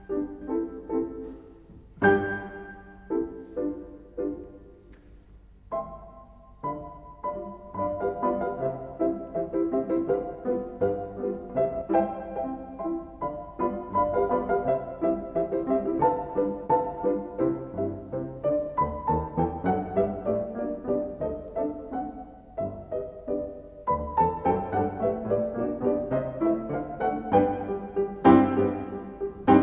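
Listening through the recording, nothing stood out as a technical problem at any point.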